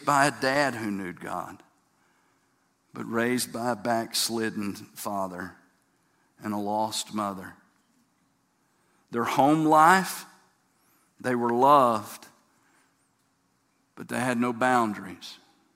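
No technical faults can be heard anywhere in this speech recording. Nothing in the sound breaks, jumps or drops out at any point.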